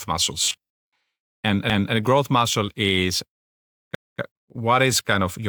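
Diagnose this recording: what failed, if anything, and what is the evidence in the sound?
Driver or buffer stage. From 0.44 to 0.93 s the speech turns into a rigid, metallic buzz, ending just before "and and a growth". The buzz sits at a fixed 93.8 Hz. That pitch fits a repeating block about 10.7 ms long. The likely cause is robotic sound from repeated short buffers. Audio arrived too slowly, so the software looped its last short block to fill the gap. Most of the real speech in that span was skipped.

Chunked processing stage. There are two overlapping chunks. The first is at 1.70 to 1.95 s, between "and and" and "a growth muscle is". The second is at 3.95 to 4.20 s, just before "uh what". At each point a 250 ms stretch plays twice, and the speech stutters. The joins fall 2.25 s apart. That spacing points to 2-second chunks. Each chunk began a quarter second before the previous one ended, so the overlap was played again.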